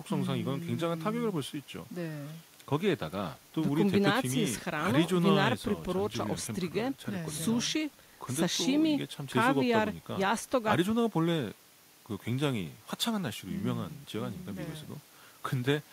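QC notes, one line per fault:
No faults found in this speech clip. Nothing on it needs flagging.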